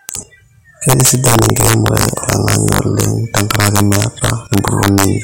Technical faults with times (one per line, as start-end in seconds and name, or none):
0.00-5.23 integer overflow